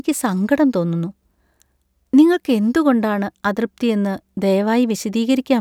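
Speech recording with no audible technical faults.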